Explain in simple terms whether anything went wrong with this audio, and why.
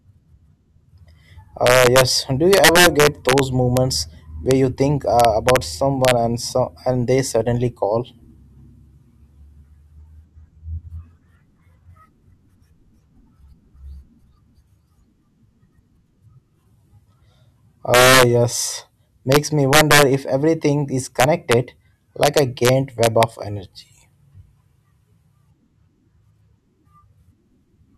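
Integer overflow runs through the whole speech clip: the loudest peaks push past the biggest number the system can store, and instead of being held at that ceiling they wrap around to the opposite extreme. Only a tiny fraction of the sound is affected, but each one produces a harsh crack, much sharper than ordinary distortion.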